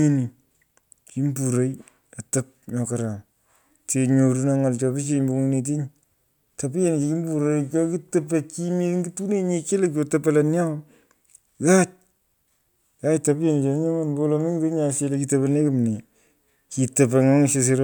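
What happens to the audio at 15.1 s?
At 15.1 s the speech carries on intact, with no dropout, click, distortion or other fault to be heard.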